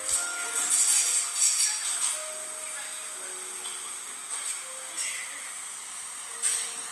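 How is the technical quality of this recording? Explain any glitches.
The quality is compromised by one fault that runs through the whole recording.

Across the full length, the audio was likely squeezed through Opus compression in its music mode at a low bitrate, perhaps near 24 kbps. Short of bits, the encoder fills bands by folding or noise, so these sounds turn plainly grainy, rough and noisy while keeping full bandwidth.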